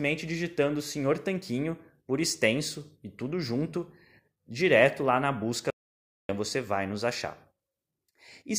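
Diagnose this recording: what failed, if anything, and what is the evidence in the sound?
An audio dropout to silence cuts the speech off mid-flow at 5.70 s, and it resumes abruptly at 6.29 s, so roughly 0.59 s is missing. The gap holds silence with no room tone. The waveform shows a flat line between two hard edges, and the spectrogram shows a fully blank vertical band. The likely cause is a break at the input stage, such as a loose connection or a momentary mute, while the recorder kept writing silence.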